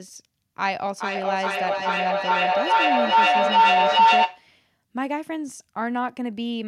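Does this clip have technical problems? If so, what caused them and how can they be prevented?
Yes, there's feedback howl from 0.65 to 4.52 s: a shared-room mic-speaker loop builds a tone near 1 kHz, pulsing roughly every 0.4 s, up to about 11 dB over speech. Mute one device or use headphones.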